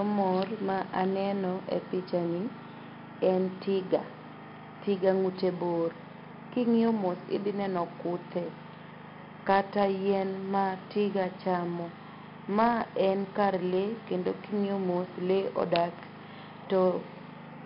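From start to end, the speech carries 4-bit ADPCM compression. Each sample is coded as a coarse step from a prediction. Heavy grit rides on every loud syllable, and sharp onsets distort. Nothing sounds above 5.3 kHz, which points to a low sample rate.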